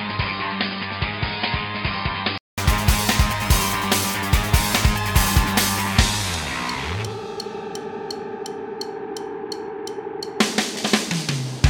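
From the start to 2.58 s the sound is dull and boxy, with nothing above 5 kHz, a few decibels quieter than what follows, and carrying a faint background noise of its own well below the signal. At 2.58 s a silence of 200 ms gives way to clearer, fuller-band audio. The likely cause is that the input switched to a poorer device: for those opening seconds a narrower-band microphone or headset call profile was capturing, before the recording moved back to the better input.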